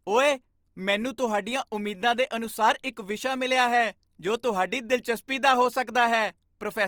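Opus compression runs through the whole clip, and the damage is plainly audible in the speech. The likely cause is the codec's music mode working at a low rate, which fits roughly 24 kbps: it keeps each band's energy but fills starved bands with folded or noise content, so the voice sounds grainy and rough rather than swirly. The bandwidth stays full, with content reaching about 20.3 kHz.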